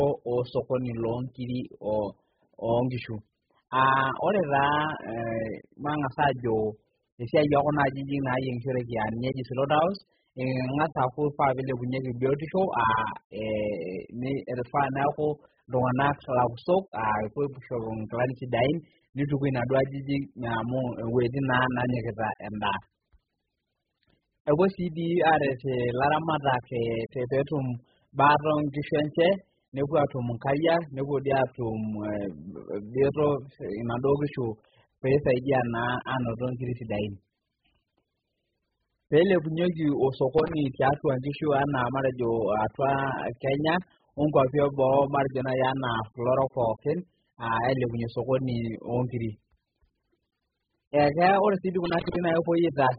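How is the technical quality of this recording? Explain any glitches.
Technical quality is poor: heavy codec damage runs through the whole speech clip, plus two short bursts of crackle near the end.

AAC compression is the likely cause of the dull, smeared sound throughout. Nothing comes through above 5 kHz, and sibilants have a warbly, fizzy edge, which fits AAC-LC squeezed down to around 8 kbps, where the encoder chops the top end and starves the remaining bands of detail.

Loose connector crackle shows up from 40.38 to 40.59 s, then again from 51.85 to 52.16 s, right after "ore si". A worn or dirty contact is making and breaking as it shifts, chopping the signal into an irregular scratchy burst.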